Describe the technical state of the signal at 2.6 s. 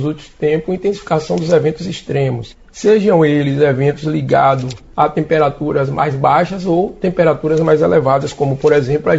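At 2.6 s the signal is intact, with no dropout, distortion, noise burst or other fault to be heard at that point.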